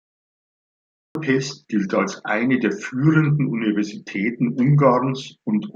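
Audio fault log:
0.00–1.15 s, cut-off start: The clip holds digital silence until 1.15 s. Speech then enters abruptly, mid-sound, just before "gilt als eine der". There is no natural onset or lead-in. Capture began late, so the utterance's opening was never recorded.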